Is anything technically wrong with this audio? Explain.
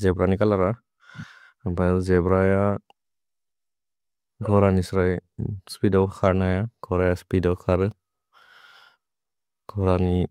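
No, nothing technically wrong can be heard in this speech recording. There is no point in the clip where a technical problem shows up.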